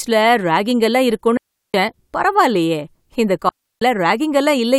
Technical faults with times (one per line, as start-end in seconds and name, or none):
1.37-1.74 digital wireless dropout
3.49-3.82 digital wireless dropout